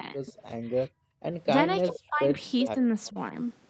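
From 0.00 to 0.29 s, the echo canceller likely mistook simultaneous talk from both ends for its own loudspeaker echo and turned the speech down by around 30 dB, so the opening dips. It does the same from 1.89 to 2.40 s (around 25 dB).

From 0.88 to 1.23 s, with the loudspeaker active, the canceller gated the microphone hard. The background sound drops by about 40 dB and then returns.

At 2.61 to 2.67 s, the canceller likely let part of the far-end signal through. This echo leak is a copy of the sound delayed by 391 ms, roughly 10 dB below the speech. Overlapping it, from 2.65 to 2.78 s, speech suppressed in double talk causes a milder dip of around 10 dB.

At 3.05 to 3.09 s, a much quieter leak arrives, again 391 ms late and some 30 dB down. From 3.09 to 3.33 s, double-talk suppression pulls the speech down by around 20 dB.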